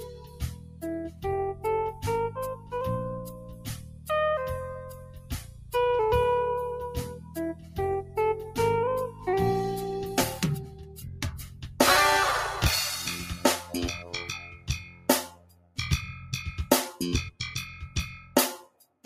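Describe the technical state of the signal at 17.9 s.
At 17.9 s the sound falls inside a stretch, from 17.31 s to the end, that the noise suppressor cut, dropping it by up to about 11 dB. Sustained energy fades and tails truncate. On the waveform the envelope visibly sags, and on the spectrogram the held partials thin out while transients survive.

Beneath this, a speech-tuned noise suppressor applied to music or sounds is active throughout, treating steady content as noise. Gain swings of roughly 15 dB cause pumping, which appears on a spectrogram as flickering, patchy bands.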